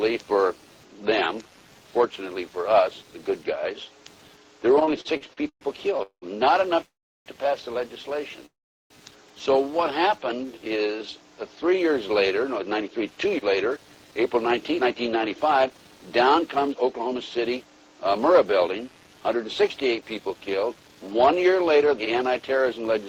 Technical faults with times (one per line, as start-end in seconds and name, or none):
0.00-23.09 computer activity noise
4.75-6.25 repeated stalls (stutter)
6.86-7.29 call audio freeze
8.46-8.93 call audio freeze
10.08-10.96 jitter buffer slow-down
12.44-21.40 jitter buffer speed-up